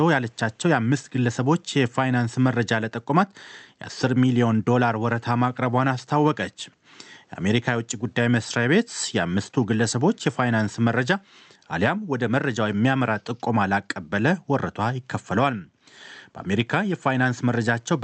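No technical faults can be heard in this speech recording.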